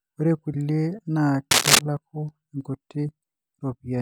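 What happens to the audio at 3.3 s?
Nothing goes wrong at 3.3 s; the speech carries on intact through that moment, with no dropout, click or distortion.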